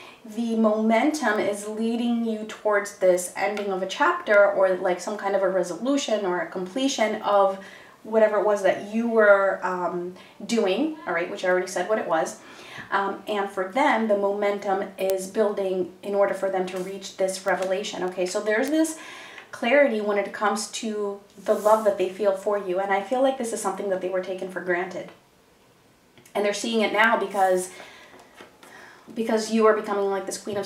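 From 0.16 s to 30.62 s, sharp ticks recur at a steady rate of about one every 0.7 s, around fifty in all across the sound. These are word clock ticks: the receiving device runs on its own clock, unlocked to the sender's digital link, so each time the two clocks slip past one another a single sample is dropped or repeated. The tick spacing points to a clock mismatch of roughly 40 parts per million.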